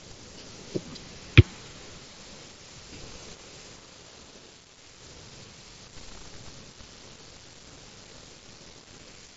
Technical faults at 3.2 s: concealed Bluetooth headset packet loss

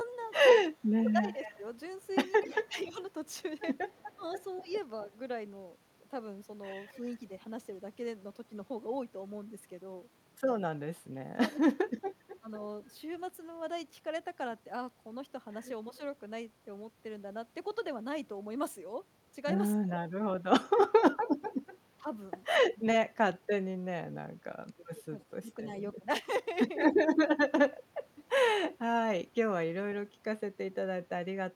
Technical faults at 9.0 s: none

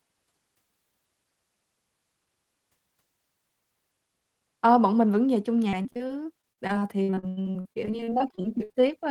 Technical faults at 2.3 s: none

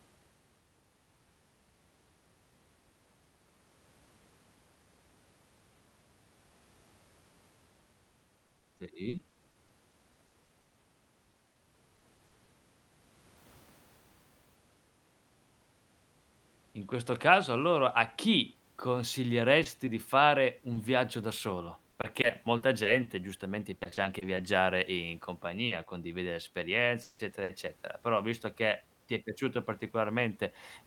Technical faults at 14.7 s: none

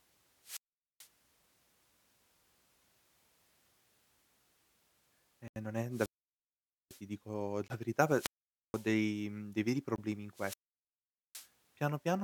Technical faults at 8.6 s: wireless microphone squelch dropout

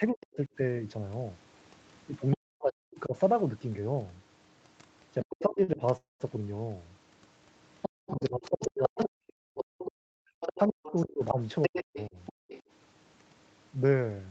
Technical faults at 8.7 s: other side's voice leaking through; speech suppressed in double talk; short stall from a late packet

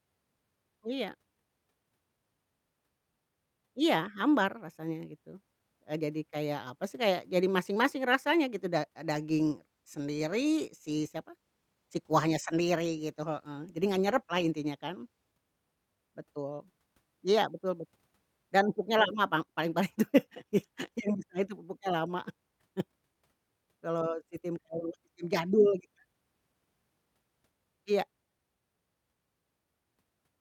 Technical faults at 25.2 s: clock drift between sender and receiver; repeated timing corrections

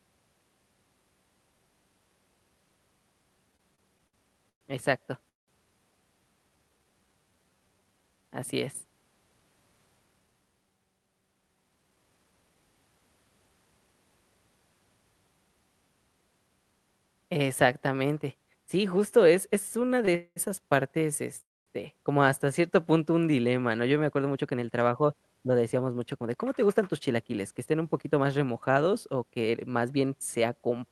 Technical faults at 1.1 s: none

